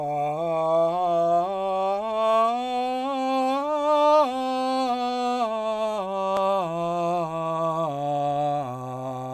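No technical faults can be heard anywhere in this music.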